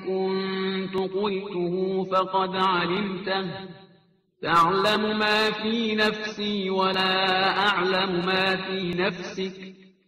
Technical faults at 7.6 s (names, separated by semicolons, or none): none